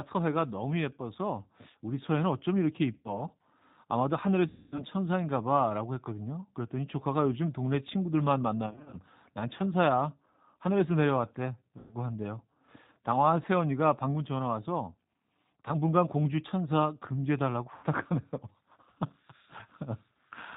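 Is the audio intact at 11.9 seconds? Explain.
No. At 11.9 s you're inside a stretch of VoIP packet loss concealed by the speech codec, running from about 11.78 to 11.94 s. Roughly 130 ms of audio never arrived, which fits thirteen missing 10 ms frames. The decoder fills the hole by repeating its last pitch and filter at steadily falling gain, so the sound smears into a buzzy tone or coloured noise that fades. The whole moment also carries the G.729 codec at 8 kbit/s. It rebuilds speech from a vocal-tract model and a few pulses per frame and passes nothing above 4 kHz, so it sounds band-limited, a bit rough and synthetic, and the damage is plainly audible.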